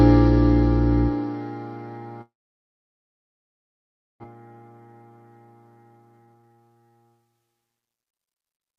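From 2.21 s to 4.26 s the sound breaks off in what is likely a long network dropout. The last sound carries on briefly as a fading buzz or hiss before nearly 1.9 s of silence, and when audio returns about 1.36 s of material is simply gone. On a spectrogram the energy smears into a decaying band, then goes blank. The waveform shrinks to a flat line until it resumes abruptly, with a delay change of roughly 0.7 s.

Right after, from 4.34 s to 5.24 s, a jitter buffer speed-up plays the sound about 11% fast. Then from 5.77 s to 7.83 s it runs about 25% fast. The receiver drains the backlog by cutting out tiny pitch-period slices, around a tenth of a second in the first stretch and roughly half a second in the second. Pitch stays put while the pace turns hurried. Spectrogram harmonics keep their height but events crowd closer together in time, and the waveform shows periodic cycles repeatedly trimmed.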